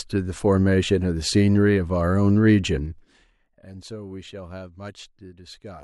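From 2.76 to 3.42 s, a 20 dB drop is applied in unsmoothed 2 dB steps, about fifteen per second, causing zipper noise: rapid ticking.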